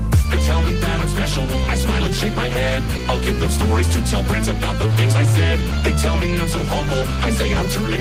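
Clock drift between sender and receiver runs through the whole clip: the sender's audio clock runs slower than the receiver's, by about one and a half percent, so the receiver's jitter buffer keeps draining faster than it is refilled. The receiver has to keep padding out the stream, which gives the audio small, unevenly spaced timing hiccups from start to finish rather than one clean break. Short stalls from a late packet occur at 1.63 s, 2.97 s and 7.54 s, each lasting about 40 ms. Each time a packet arrived after it was due, the buffer ran empty, and the receiver held the last sound for 20 ms before resuming from the same point as the delay grew by 20 ms. Nothing is skipped, but the sound briefly sticks, with a faint buzz or dip. Repeated timing corrections run from 3.87 s to 5.96 s, where playback moves at 98% speed as the receiver repeatedly repeats short fragments to keep pace with the slow sender. 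Together these edits add about 50 ms. They all push in the same direction but land at irregular intervals.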